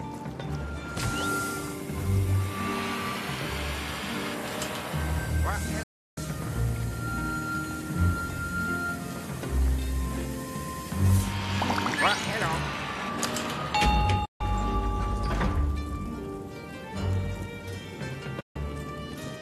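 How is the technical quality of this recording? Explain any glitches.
The recording has three digital broadcast dropouts. At 5.83 s the sound fades out over about 8 ms and stays silent until 6.18 s, a gap of 336 ms. Shorter gaps of 144 ms follow at 14.25 to 14.41 s and 18.40 to 18.56 s. The receiver lost the signal or rejected corrupted frames, so it muted until clean data returned. The gap lengths fit whole frames of 24 ms. Anything broadcast during those holes is gone.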